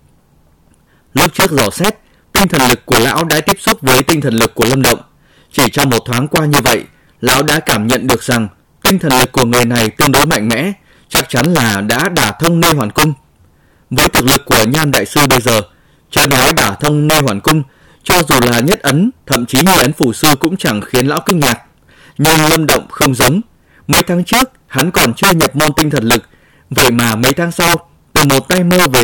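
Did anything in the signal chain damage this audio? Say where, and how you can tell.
Yes, integer overflow, probably in a gain or sample-format conversion stage running in integer arithmetic. Throughout the speech, loud peaks snap into harsh cracks, far sharper than clipping. The signal's driven about 10 dB too hot, so a few percent of samples wrap to the opposite extreme.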